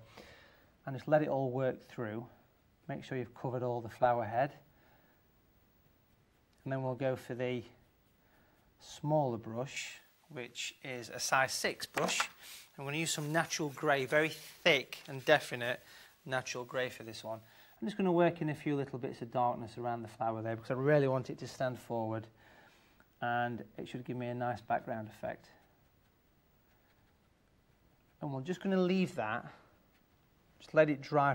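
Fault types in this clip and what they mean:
Pre-emphasis left on: the treble lift added before recording or transmission was never removed by its matching de-emphasis, so from 9.76 to 17.76 s the top end sits about 11 dB above 1 kHz at 10 kHz, which fits a J.17 curve, sounding thin, bright and sibilant.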